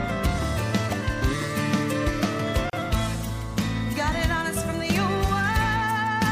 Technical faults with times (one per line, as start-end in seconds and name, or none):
2.70-2.73 gap at a join of encoded pieces